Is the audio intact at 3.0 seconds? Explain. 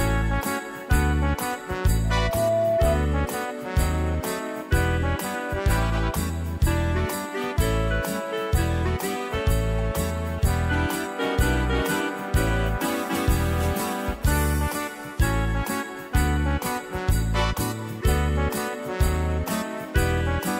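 No, 3.0 s falls inside a loudspeaker feedback squeal from 2.04 to 3.04 s: the mic picks up its own speaker, so a 666 Hz tone swells within half a second into a shrill squeal riding a few dB over the sound.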